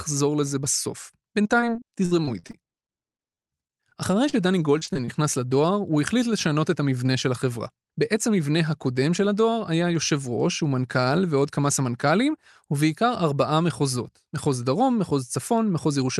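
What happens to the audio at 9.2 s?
Nothing goes wrong at 9.2 s: the speech carries straight through that moment intact, with only the steady coding texture and softened top end of the call path, which sounds limited to about 12 kHz, consistent with Opus at 32 kbps.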